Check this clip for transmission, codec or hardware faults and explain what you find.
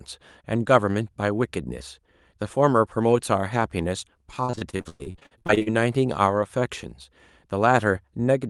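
One transmission fault is audible in this speech clip: repeated packet loss (robotic sound), from 4.45 s to 5.68 s. Over this stretch, packets repeatedly went missing or arrived too late. Each hole was covered by stretching out the preceding sound, with the next dropout following almost at once. The holes run up to 108 ms long, and close to half of the span is patched rather than real. The speech therefore turns choppy, with fragments missing.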